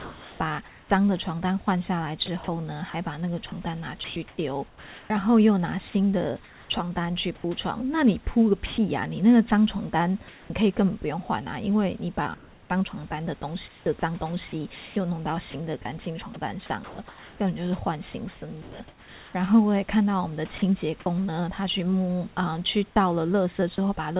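Speech clip in which the real room background gives way to a steady, featureless hiss from 0.0 to 0.9 s and again from 10.28 to 10.5 s, the second time about 1 dB quieter. This is comfort noise in place of the background, most likely because the sender paused transmission during silence and the receiver synthesised matching noise. From 2.26 to 5.1 s, 6.44 to 8.78 s, 12.34 to 18.8 s and 20.58 to 21.06 s, quiet edges of the speech drop out. Roughly 0.7, 0.44, 1.46 and 0.1 s are lost respectively. This is sound chopped by the voice detector, likely from it toggling transmission on and off. At 23.76–23.78 s, a brief bit of sound vanishes into noise. This is sound dropped by the voice detector, likely from it mistaking that sound for background. The call path carries nothing above 4 kHz, which fits G.711 A-law. Room noise sits about 32 dB below the speech.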